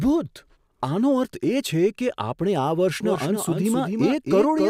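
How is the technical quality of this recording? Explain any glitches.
The speech has one audible fault. From 3.03 s to the end there is a doubled audio track: a second copy trails roughly a third of a second behind, about 5 dB quieter. It is likely captured again through a slower path, giving a dry, abrupt-onset echo.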